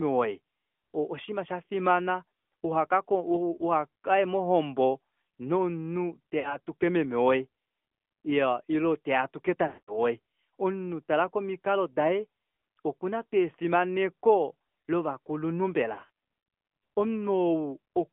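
AMR narrowband mobile codec runs throughout: the speech passes through a 200 Hz to 3.5 kHz line band, with nothing above it, and the codec damage is plainly audible. A vocal-tract model driven by sparse pulses rebuilds the voice, giving a buzzy, synthetic edge. The sound points to a mid-rate mode near 10.2 kbps.

Lost AMR speech frames occur at 6.40–6.57 s, 9.68–9.99 s and 15.94–16.10 s. Frames failed their checksum, so the decoder reused the last good pitch and vocal-tract settings at falling gain. The first gap is short, consistent with about two frames, and gives a brief dip and warble. The second, near 200 ms, drags the sound out before it fades to silence. The third is scattered over 200 ms, in runs no longer than 40 ms, and gives brief dips or warbles.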